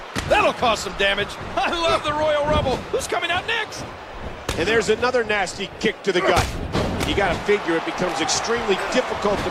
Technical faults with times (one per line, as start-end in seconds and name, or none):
none